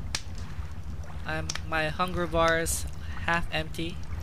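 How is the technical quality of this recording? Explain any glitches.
No glitches can be heard anywhere in the recording, so there is nothing to explain.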